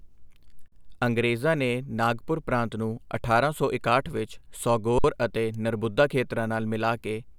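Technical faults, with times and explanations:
0.68–0.72 s and 4.99–5.04 s, underrun with held sample: the speech freezes on a flat, held level for 40 ms and then 55 ms, the second between "ਅਠਾਰਾਂ ਸੌ ਇਕਾਹਠ ਵਿੱਚ" and "ਅਤੇ ਨਰਬੁੱਦਾ ਖੇਤਰਾਂ". The output buffer ran dry and the converter held its last sample. Unlike a dropout to zero, it stops almost clicklessly. Nothing seems lost, so playback resumes where it paused, with only a soft edge.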